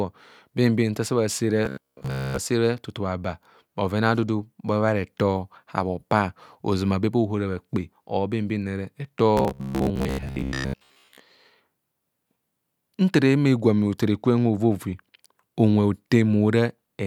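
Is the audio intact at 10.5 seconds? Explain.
No. From 9.37 to 11.20 s, robotic sound from repeated short buffers imposes a fixed buzz near 67 Hz, likely from a roughly 15 ms chunk looping over most of the skipped audio. Unlike dropouts, the sound never goes silent.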